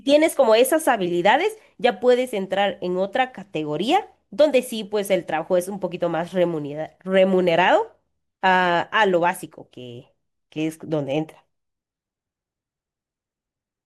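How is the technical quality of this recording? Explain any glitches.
No glitches or technical faults can be heard anywhere in this speech recording.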